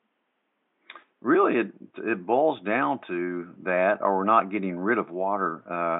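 Speech recording with no technical faults to report.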